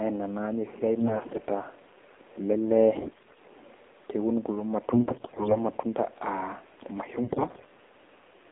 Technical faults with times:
0.00-8.52 AMR narrowband mobile codec
1.00-1.44 AMR bit errors
2.94-3.40 AMR bit errors
4.94-5.58 AMR bit errors
7.22-7.69 AMR bit errors

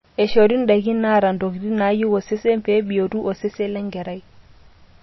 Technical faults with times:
0.00-5.02 MP3 compression

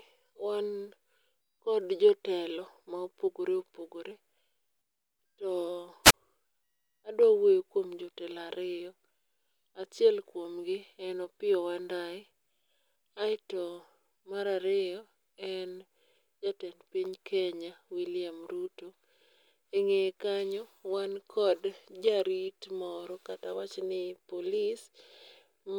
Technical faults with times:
6.04-6.14 wireless microphone squelch dropout

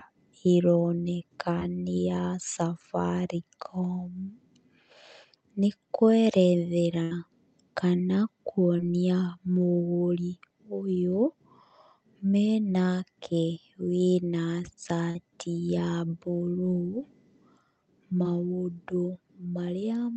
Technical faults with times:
1.59-1.63 short concealed packet loss
7.03-7.13 burst of packet loss
8.77-8.80 short concealed packet loss
15.10-15.17 short concealed packet loss
18.23-18.26 short concealed packet loss

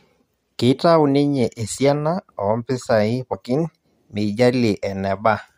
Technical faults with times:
3.32-3.34 compressed frames skipped

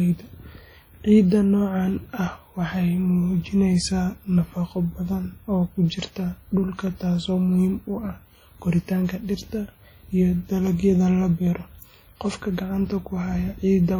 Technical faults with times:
0.00-14.00 WMA compression

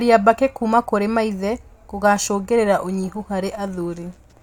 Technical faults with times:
none

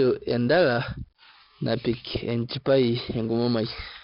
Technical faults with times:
0.00-4.03 4-bit ADPCM compression

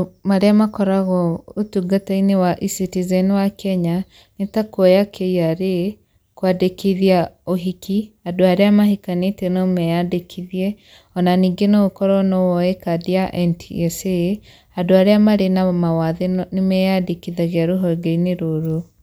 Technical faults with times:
none

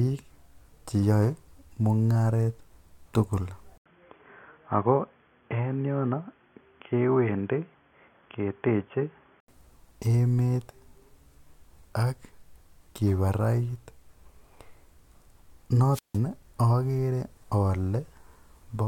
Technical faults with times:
3.78-9.48 input switched to a poorer device
15.91-16.19 wireless microphone squelch dropout

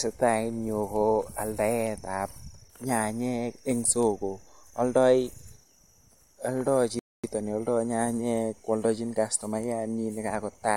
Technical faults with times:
6.99-7.24 rebuffering stall

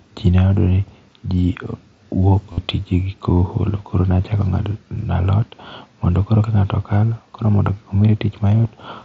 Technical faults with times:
2.52-2.58 concealed Bluetooth headset packet loss

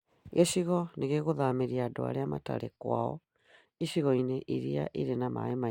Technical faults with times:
none

